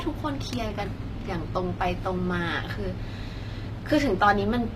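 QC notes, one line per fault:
throughout, HE-AAC compression: the treble is rebuilt from copied lower bands, likely a low-bitrate HE-AAC encode near 24 kbps, so s sounds turn gritty and lispy, with nothing above 15.5 kHz.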